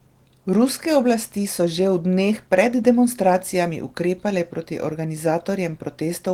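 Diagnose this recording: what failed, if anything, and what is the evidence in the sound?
Clock drift between sender and receiver sits at the network and jitter-buffer stage. The sender's clock runs roughly 5 percent fast, so the receiver's buffer keeps overfilling throughout the speech. This differs from network jitter: the hiccups all push the same way, with no silent gaps.

Repeated timing corrections run from 0.25 to 6.03 s. The receiver trims short slices to shed the surplus, so the speech runs at an effective 105 percent pace. Unlike packet-loss dropouts, nothing is muted or smeared, only shortened.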